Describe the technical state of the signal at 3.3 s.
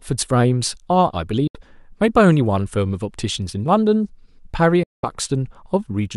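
At 3.3 s the speech signal is intact, with no fault present at that moment.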